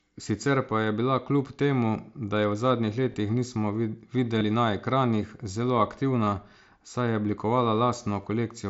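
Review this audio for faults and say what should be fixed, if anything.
Concealed Bluetooth headset packet loss at 3.12–3.14 s, 4.38–4.41 s, 6.25 s and 8.22–8.24 s: each gap, about 22.5 ms, is patched by repeating recent waveform, showing as brief steady-level, regularly periodic stretches with sharp, evenly spaced harmonics. Keep the headset close to the phone and away from Wi-Fi congestion so the link stops dropping packets.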